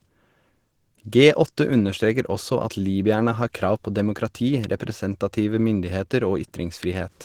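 From start to finish the speech sounds muffled and hoarse, with a grainy, roughened edge on the voice. That's likely Opus compression running in its hybrid speech mode, which fits a low rate around 16 kbps, where the encoder fills and approximates detail instead of keeping it.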